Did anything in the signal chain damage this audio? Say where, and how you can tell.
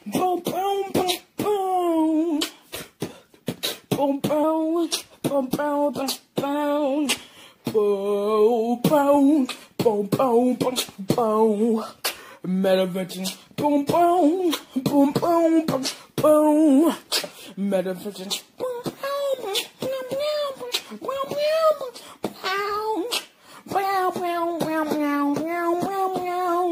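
Yes: a wrong sample rate at playback, 4.44 to 7.06 s. Speed and pitch rise together, 1.09 times and 1.47 semitones, fitting 44.1 kHz audio played unconverted at 48 kHz.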